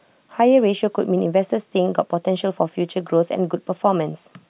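No technical faults can be heard in this speech recording. Nothing in the audio points to a problem that needs explaining.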